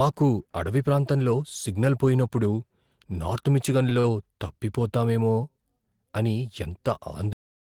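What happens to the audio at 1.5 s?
Nothing goes wrong at 1.5 s: the speech there runs on intact, with no dropout, click or other fault.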